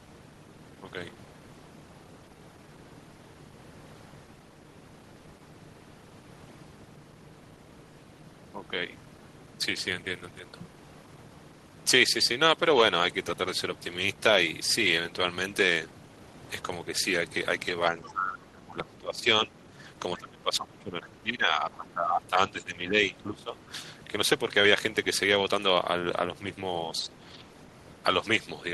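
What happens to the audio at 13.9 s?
Nothing goes wrong at 13.9 s: the speech carries on intact through the call path, with no dropout, glitch or distortion at that moment.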